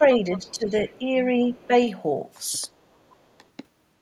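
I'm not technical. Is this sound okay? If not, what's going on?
No. Two related call faults are audible.

Speech suppressed in double talk: from the start to 1.45 s, the talker's voice dips noticeably for about a second in total, with brief dips again at 1.67–1.72 s, 2.67–2.71 s and 3.38–3.44 s. Both people were likely talking at once, and the call's echo-removal system, unable to tell the talker apart from the other person coming out of the loudspeaker, turned everything down together.

Other side's voice leaking through: a second, fainter voice slips in at 0.35–0.54 s, where it is most noticeable, and more faintly at 0.87–0.99 s, 1.5–1.67 s and 3.09–3.16 s. The other person's voice, played on the talker's loudspeaker, was likely picked up again by the microphone, and the echo removal failed to strip all of it out, leaving these short scraps.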